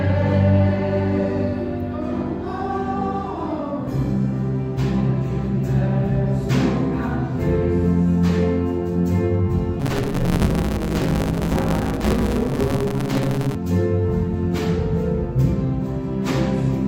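From 9.79 to 13.55 s there is a block size mismatch (truncated). One stage writes longer blocks than the next reads, so each block's tail is discarded. This produces a 150 Hz buzz at the block rate and a 1.6x speed-up at near-normal pitch, consistent with 512-sample blocks.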